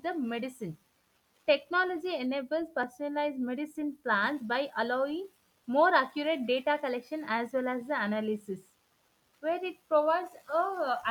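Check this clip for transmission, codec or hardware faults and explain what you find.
There's one fault, a block of digital silence at 2.83 s. Roughly 1.7 ms of samples drop out with no fade in or out, probably because the output buffer wasn't filled in time. A gap that short comes across as a tick or dip in the speech.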